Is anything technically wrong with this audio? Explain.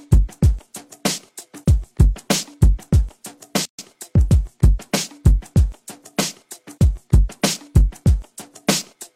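Yes. From 3.65 to 3.79 s there is a gap at a join of encoded pieces: a 134 ms gap with smeared edges. The separately encoded pieces were joined without trimming each encoder's start delay and last-frame padding, so the sound stops, then resumes where it left off.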